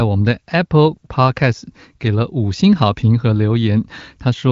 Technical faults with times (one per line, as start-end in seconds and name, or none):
none